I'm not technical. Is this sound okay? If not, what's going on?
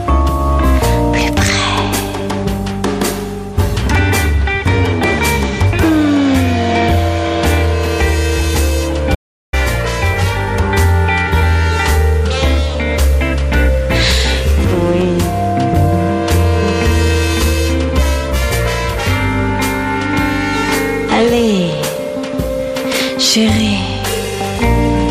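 No. At about 9.15 seconds the sound suddenly cuts out, and for roughly 0.38 seconds there is total silence, not even the faint background hiss of the room, before it comes back abruptly at 9.53 seconds. This is an audio dropout to silence. The likely cause is that the input was briefly lost, perhaps through a loose connection or a momentary mute, while recording carried on and filled the gap with nothing. Whatever happened in that moment is gone.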